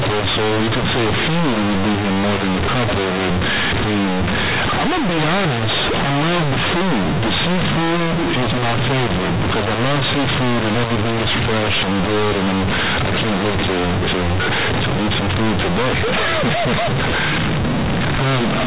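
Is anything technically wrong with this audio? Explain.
Yes. Companded audio read as linear runs through the whole clip: A-law telephone bytes are played as plain 8-bit samples without expansion, so small values jump across half the range. The speech becomes very loud, buzzy distortion, pauses fill with strong noise, and nothing above 4 kHz is heard, which fits 8 kHz telephone coding.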